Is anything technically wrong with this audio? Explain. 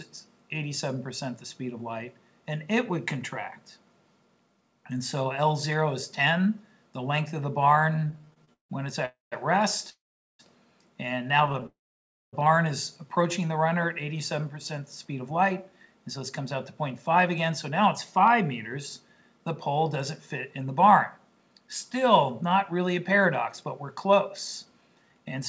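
Yes, there are several timing faults.

Repeated stalls (stutter) occur at 7.96–8.71 s and 11.47–11.66 s. Late packets kept draining the jitter buffer, so the last sound was stretched: fifteen hitches, up to 162 ms, then six brief catches.

Call audio freezes occur at 9.05–9.34 s, 9.90–10.41 s and 11.66–12.35 s. The sound halts, buzzes briefly, then falls silent for about 0.16, 0.42 and 0.59 s before resuming, likely because packets were held up and the buffer emptied.

A jitter buffer slow-down occurs at 13.39–13.75 s. The receiver repeated pitch periods to rebuild its reserve, adding 42 ms, so the audio drags at 90% speed with unchanged pitch.

A jitter buffer speed-up runs from 15.05 to 25.39 s. The receiver trimmed small pieces to shed excess delay, roughly half a second in total, so the audio sounds slightly hurried at 105% speed.

The call codec path cuts everything above 8 kHz, which fits G.722 at 64 kbps.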